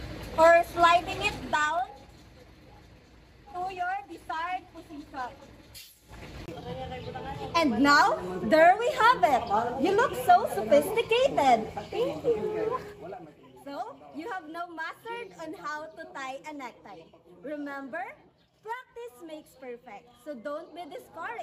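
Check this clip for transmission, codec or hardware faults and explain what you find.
Two stretches of zipper noise stand out. From 1.32 to 1.90 s the level drops by roughly 15 dB. From 5.90 to 6.46 s it rises by roughly the same amount. Neither move is smoothed. Each is made of 3 dB jumps, roughly seven a second. Every jump is an abrupt discontinuity in the waveform, so it clicks. The result is a fast ticking that rides on the sound only while the level moves.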